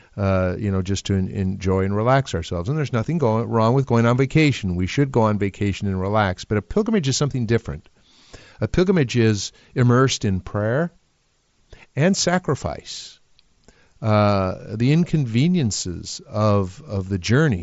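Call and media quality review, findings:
No findings for the call and media quality review: the speech over the Bluetooth mSBC headset link, band-limited to about 7.7 kHz, shows no faults.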